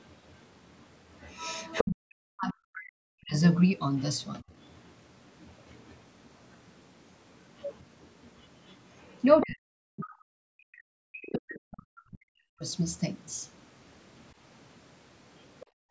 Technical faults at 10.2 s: other side's voice leaking through; speech suppressed in double talk

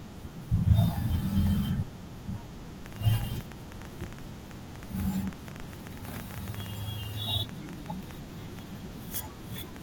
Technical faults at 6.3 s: train of clicks

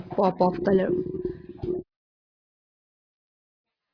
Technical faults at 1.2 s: none

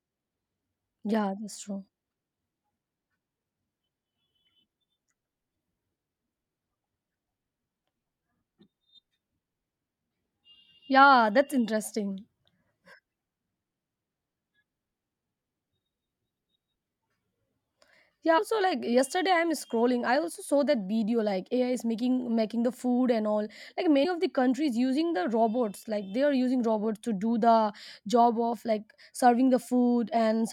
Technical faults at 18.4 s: compressed frames skipped

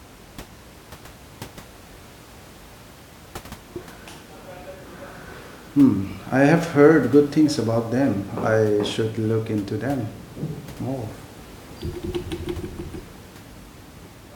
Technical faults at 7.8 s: none

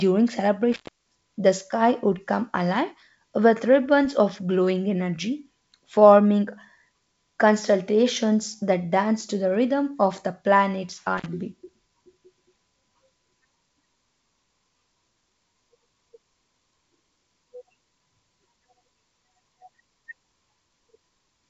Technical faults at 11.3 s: intermittent contact

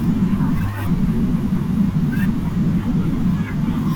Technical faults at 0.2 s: none

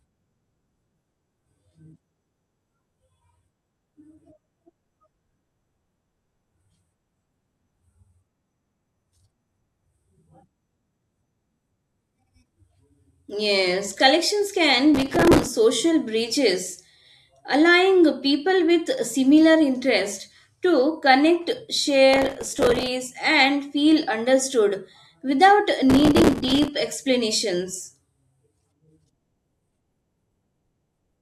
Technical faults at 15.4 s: processor overload crackle

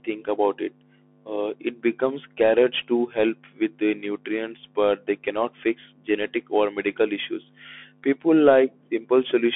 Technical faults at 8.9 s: Bluetooth CVSD headset codec

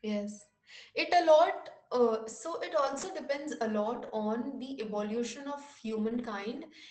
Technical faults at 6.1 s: lost packet rebuilt from error correction

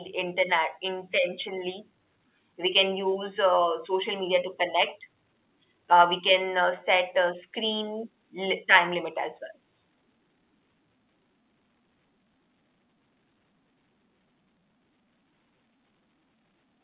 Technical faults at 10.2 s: none

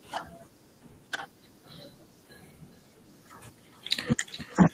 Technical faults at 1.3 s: none

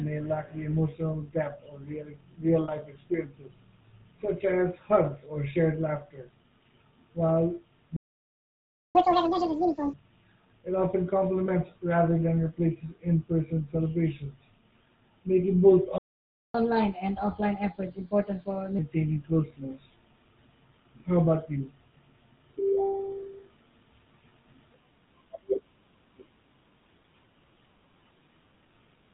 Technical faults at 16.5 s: GSM full-rate codec; playback stall; catch-up at higher speed

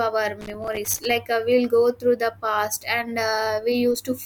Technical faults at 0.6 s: loose connector crackle

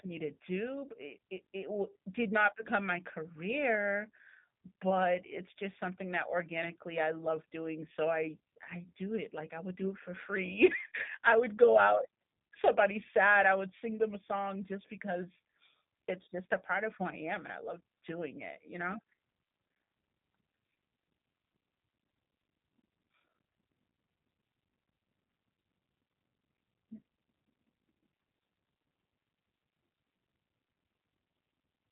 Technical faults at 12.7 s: G.729 codec

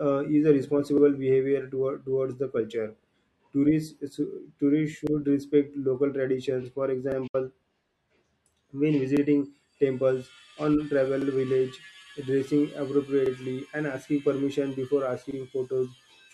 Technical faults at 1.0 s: overlapping chunks

